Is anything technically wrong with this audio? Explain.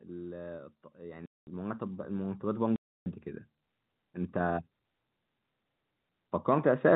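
Yes, there are two faults in this telephone-band speech.

From 0.95 to 3.27 s, automatic gain rising lifts the level by about 10 dB. The gain control judged the input too quiet and ramped up slowly, so the voice and the background noise swell together over more than two seconds.

Packet loss filled with silence cuts two holes, from 1.26 to 1.47 s (210 ms) and from 2.76 to 3.06 s (300 ms). The receiver inserted silence where packets were missing, so the speech stops abruptly with hard edges. Both gap lengths fit 30 ms packets.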